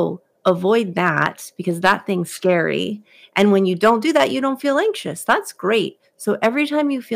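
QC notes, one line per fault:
0.47–0.50 s, 0.98–1.26 s, 1.85–1.92 s, 3.37–3.42 s, 3.86–4.24 s, 5.29–5.33 s: hard clipping. Peaks are driven about 2 to 7 dB past full scale and cut flat, adding harsh upper harmonics heard as crackly fuzz on loud syllables.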